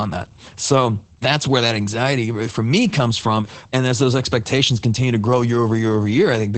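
Throughout, Opus voice compression in SILK mode, fitting about 12 kbps, codes speech coarsely, leaving it hoarse and muffled; spectrograms show nothing above 8.6 kHz.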